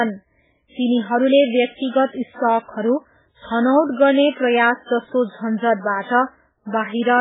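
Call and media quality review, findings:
Heavy MP3 compression throughout the speech, 0 to 7 s. Nothing above 3.8 kHz, watery swirling texture, smeared attacks, metallic chirps on s sounds. Likely an MP3 encoder starved of bits, as at about 8 kbps, zeroing weak spectral lines frame to frame. Not a plain low-pass filter: the swirl and chirping come from detail switching on and off, not a steady loss of treble.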